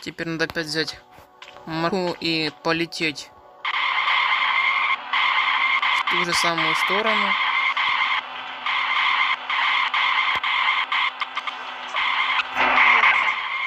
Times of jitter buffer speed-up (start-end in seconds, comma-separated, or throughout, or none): 8.21-8.60, 9.36-11.41